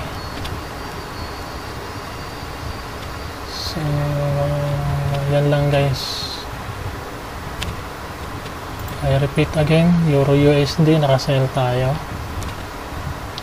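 No technical faults can be heard anywhere in this clip. There is nothing in the audio that calls for comment.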